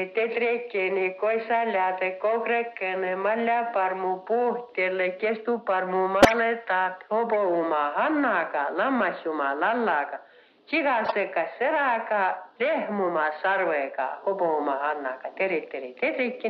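Bursts of squeaky noise at 6.22–6.40 s (loud, several frames), 7.34 s (a faint blip) and 11.04–11.13 s: corrupt frames decoded, their damaged bits misplacing energy across frequencies.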